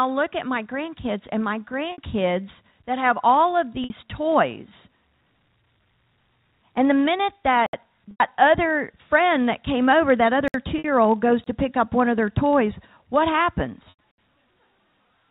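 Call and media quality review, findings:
Block size mismatch (padded), throughout: steady buzz at 43.1 Hz under the whole signal. Probable component: the buffer handoff between two processing stages. The writing stage delivers short blocks and the reading stage zero-pads each one, which fits a 1024-sample read block. The repeated gap produces the buzz and slows playback to 0.999x. The G.711 A-law telephone band above it is audible as a 4 kHz ceiling.

Packet loss with pitch repetition at 1.92 s, 3.84 s, 8.11 s, 10.78 s (just before "old goes to pick") and 13.90 s. Symptom: a brief held, buzzy tone where the sound should move on. It lasts 60 ms at the first, second and fourth events and 90 ms at the third and fifth. Probable component: receiver concealment, which loops the last pitch period and fades it out. The durations fit two to three lost packets each.

Block of digital silence at 7.66 s (about 70 ms), 10.48 s (about 63 ms, right after "that came over that"), 11.44 s (23 ms, between "old goes" and "to pick up one") and 14.11 s (about 70 ms). 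Symptom: hard dropout to silence with no fade. Probable component: the output path missing its buffer deadline. The 23 ms hole fits one 1024-sample block left unfilled.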